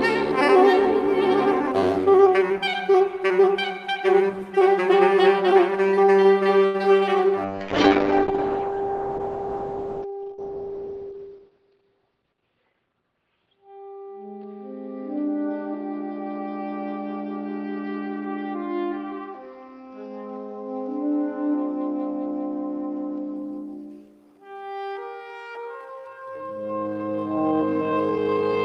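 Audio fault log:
6.65–6.76 s, short stall from a late packet: A packet missed its playout moment and the jitter buffer emptied, so the receiver held the last sound for about 87 ms until the data arrived, then resumed from exactly where it stopped. Nothing is lost, but one sound lingers unnaturally long with a faint buzzy, wavering quality, and everything afterwards plays about 87 ms later than before.
7.45–23.42 s, call bitrate drop: The call's bandwidth estimate collapsed and the encoder was pushed from 48 kbps down to 8 kbps, staying at that floor for about 5 s. At such a low rate the codec quantises coarsely and narrows the audio band from 20 kHz to about 6 kHz, so the sound turns dull, muffled and watery, with grainy texture, until the bitrate climbs back near the end of the range.
11.04–11.86 s, jitter buffer speed-up: Audio had piled up in the jitter buffer beyond its target depth, so the receiver repeatedly trimmed out pitch-period-sized slices, around 70 ms in total, to drain the backlog. 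The passage plays at 109% speed with its pitch unchanged, giving a brief hurried feel. It sits inside the low-bitrate stretch, so the rushing comes on top of the muffled tone.
24.35–28.65 s, time-stretched section: From 24.35 s to the end the audio slows to about 0.59 times its normal pace while pitch stays fixed, an abrupt change in tempo that sounds drawn out and dragging, as short fragments are repeated to fill the extra time. The likely cause is software stretching this final segment to fit a required duration, using a pitch-preserving overlap method.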